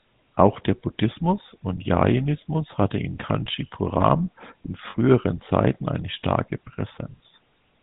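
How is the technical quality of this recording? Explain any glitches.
The quality is poor. The speech runs through a low-bitrate phone codec for the whole clip, and there is one brief dropout glitch.

The GSM full-rate codec is active from start to finish. It reduces the speech to a vocal-tract model driven by sparse, evenly spaced pulses, which fits the 13 kbps full-rate coder, and discards everything above 4 kHz. The result is a dull, band-limited sound with a plainly audible buzzy, gravelly roughness.

Lost GSM frames occur from 4.9 to 4.97 s, a gap of about 40 ms, which fits two dropped 20 ms frames. The decoder covers the gap by repeating the last good frame's parameters. This holds the sound briefly as a short, rough, metallic ring.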